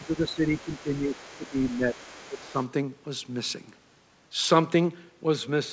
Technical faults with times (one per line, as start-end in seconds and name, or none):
0.00-1.97 speech suppressed in double talk
0.56-2.65 other side's voice leaking through
2.28-2.57 speech suppressed in double talk